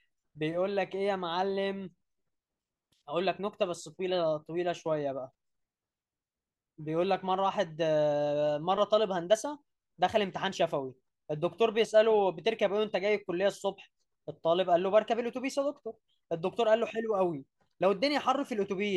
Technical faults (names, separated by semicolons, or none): none